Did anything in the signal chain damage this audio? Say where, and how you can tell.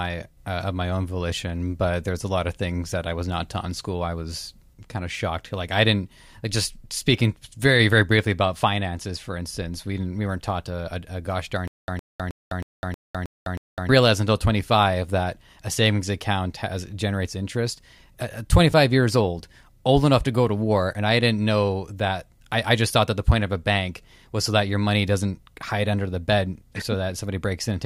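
Yes. From 11.68 to 13.89 s there is stutter with silent gaps: a 111 ms burst of speech repeats seven times, each followed by about 206 ms of digital silence, every 316 ms. This likely comes from a playback or stream stall. Unlike a clean dropout, the same fragment recurs, and the speech it should have carried is lost.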